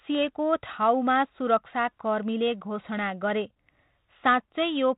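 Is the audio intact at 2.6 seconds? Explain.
Yes, at 2.6 seconds the speech is intact, with no dropout, click or distortion at that moment.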